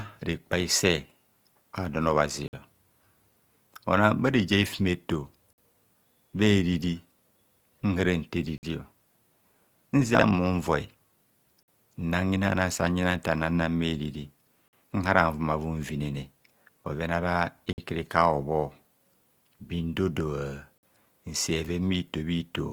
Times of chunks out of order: 10.15-10.23, 19.14-19.22

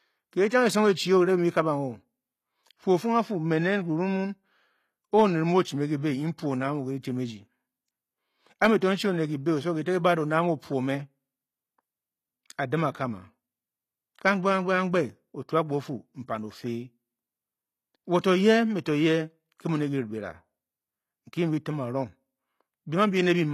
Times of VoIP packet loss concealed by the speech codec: none

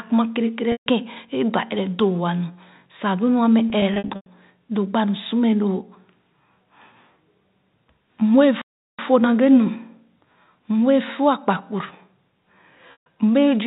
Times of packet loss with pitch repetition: 0.72-0.86, 3.70-4.26, 12.92-13.06

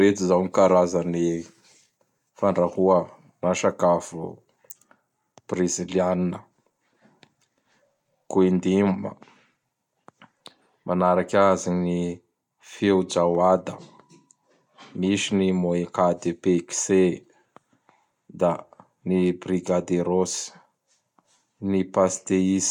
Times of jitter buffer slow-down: none

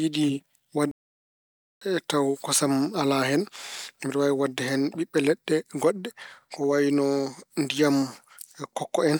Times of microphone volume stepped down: none

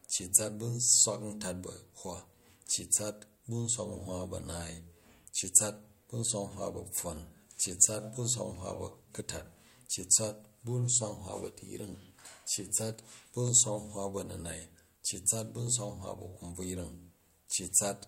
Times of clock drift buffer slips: 0.15-17.69

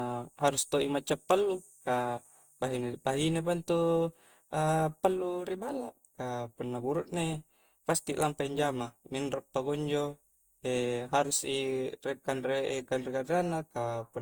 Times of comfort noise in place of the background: none

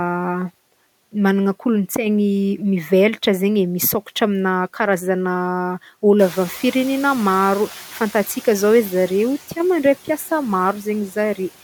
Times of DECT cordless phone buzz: none

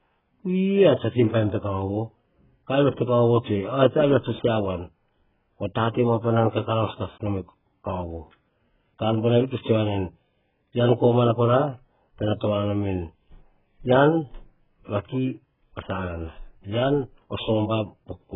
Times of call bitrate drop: none

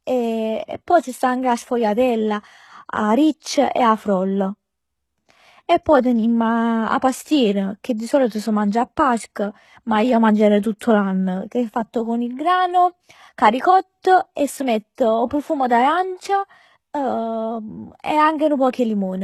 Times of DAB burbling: none

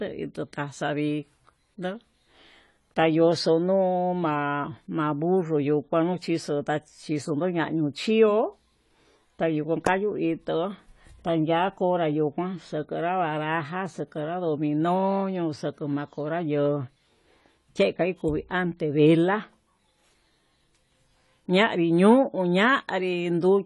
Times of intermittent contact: none

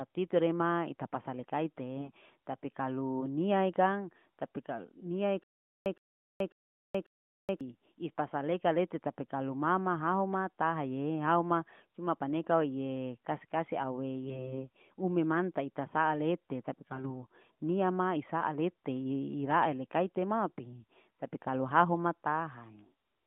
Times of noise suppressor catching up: none

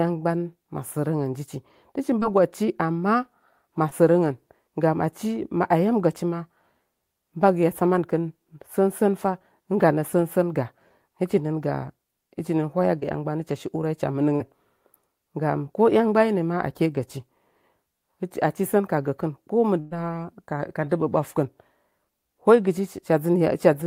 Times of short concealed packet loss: 2.19-2.23, 3.89-3.93, 12.99-13.04, 14.36-14.42

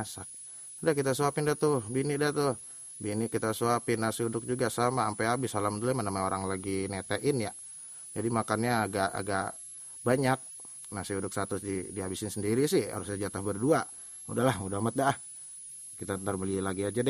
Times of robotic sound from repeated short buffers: none

